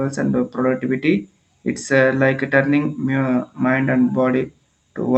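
No technical faults are audible.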